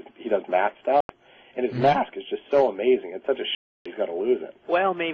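At 1.00 s the sound cuts out. Silence lasts about 87 ms, until 1.09 s. A longer gap follows from 3.55 s to 3.86 s, close to 305 ms. Both gaps match a Bluetooth dropout as the likely cause. Audio packets reached the headphones too late and were discarded. The sound returns further along, as if it had kept playing underneath. The second hole fits roughly twenty lost packets.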